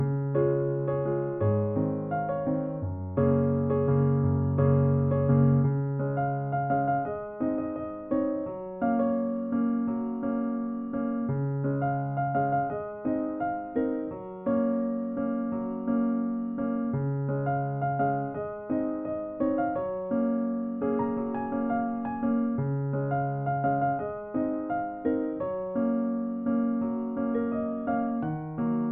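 Nothing in this audio stands out as a technical fault, so there's nothing to flag here.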